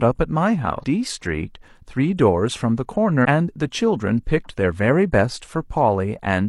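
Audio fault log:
0.79–0.84 s and 3.21–3.26 s, damaged data in a compressed stream: two short blips, each about 50 ms, where corrupted bytes threw the decoder off. It garbled those frames and lost sync until it locked onto a clean frame header again.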